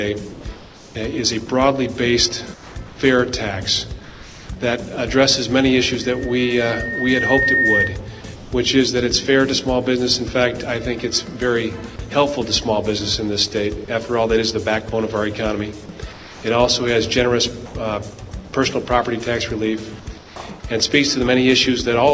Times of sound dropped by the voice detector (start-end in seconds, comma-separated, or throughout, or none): 17.66-17.75